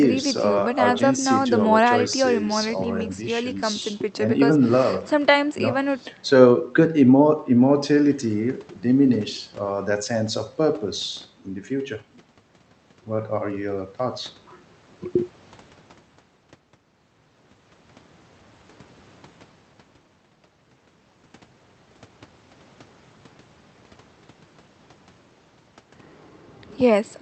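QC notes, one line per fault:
No faults heard anywhere in this speech recording.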